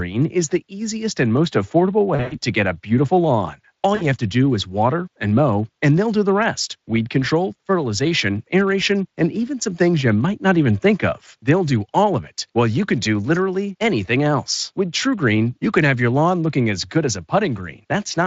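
Around 2.15 to 2.38 s you get VoIP packet loss concealed by the speech codec: roughly 140 ms of audio goes missing across a 160 ms stretch, the longest gap about 100 ms, which fits several 20 ms frames. The Speex decoder keeps replaying its last pitch and filter at falling gain, so the speech smears into a buzzy tone or coloured noise that fades. A shorter dropout, about 60 ms, repeats the effect at 3.95 to 4.06 s.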